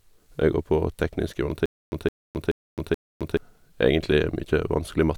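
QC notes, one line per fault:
1.66 to 3.37 s, stutter with silent gaps: Right after "går på teknisk", a 165 ms burst of speech repeats 4 times, each followed by 264 ms of digital silence, a 429 ms cycle. The likely cause is a stalled stream replaying its last fragment. The missing speech is lost.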